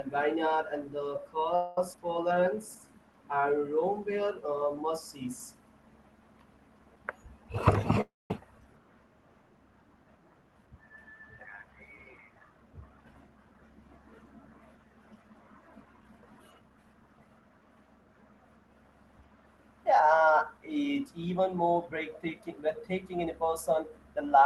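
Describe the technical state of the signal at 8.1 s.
A call audio freeze runs from 8.01 to 8.31 s: the continued sound fades to silence, likely from a drained jitter buffer, then resumes about 290 ms late.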